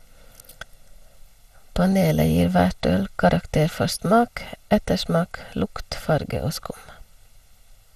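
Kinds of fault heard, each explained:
channel delay (comb filtering): One channel arrives about 1.5 ms late, and summing both to mono cancels shared content at evenly spaced frequencies starting near 300 Hz. The speech sounds hollow and phasey; a spectrogram shows fixed dark horizontal bands throughout.
generation loss: The speech sounds swirly and smeared, with blurred consonant attacks and nothing above 15 kHz. This is likely from repeated lossy re-encoding, perhaps around ten passes, consistent with MP2 at 96 kbit/s. A spectrogram shows a hard ceiling, patchy holes and softened onsets.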